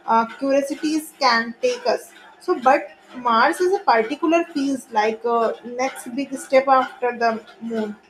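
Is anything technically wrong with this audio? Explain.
Yes. From 0.43 to 0.65 s the speech carries DAB burbling: residual bit errors, at a low rate, slipped past error correction into the MP2 data. Corrupted samples put short blips of noise in single sub-bands and corrupted scale factors make sub-bands jump in level, heard as burbling blips across about eight damaged frames.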